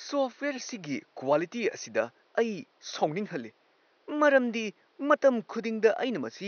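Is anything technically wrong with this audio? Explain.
No, nothing technically wrong; the only thing under the speech is the room's own background noise, sitting about 39 dB below it, which belongs to the recording rather than to any fault in the chain.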